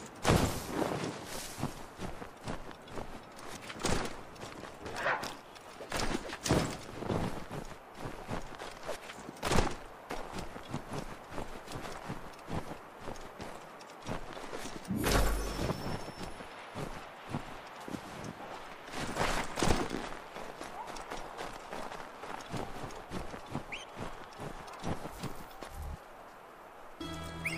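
Nothing stood out as a technical problem on listening.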